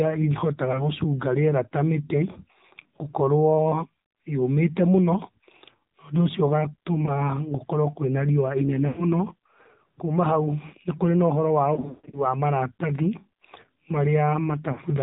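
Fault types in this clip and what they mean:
AMR narrowband mobile codec: the mobile speech codec cuts everything above 4 kHz, and the buzzy, synthetic tone fits a low 7.4 kbps mode.
Lost AMR speech frames: the decoder stretches and fades the last good sound, so there are brief warbles from 0.72 s and a drawn-out, choppy patch around 11.7 to 12.3 s.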